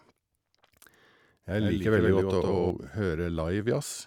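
A doubled audio track runs from 1.58 to 2.70 s. Over that stretch the speech is joined by a second full-band copy of itself trailing about a tenth of a second behind, at roughly 5 dB below the original. The copy carries no decay or room colour and appears and vanishes abruptly. The likely cause is the same signal being captured twice, once through a slower path, or an edit leaving two copies out of step.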